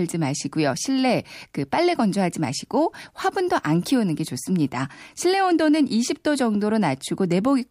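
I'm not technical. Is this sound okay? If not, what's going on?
Yes, no technical faults are audible anywhere in this speech recording.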